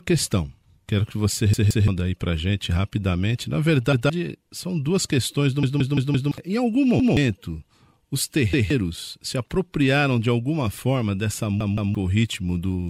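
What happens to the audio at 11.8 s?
A repeated buffer occurs from 11.61 to 11.95 s, just after "de alguma forma dessa". Fresh audio arrived late, so the same block of about 170 ms, consistent with an 8192-sample buffer, is played twice more. This produces a stutter with hard joins and replaces roughly 300 ms of speech.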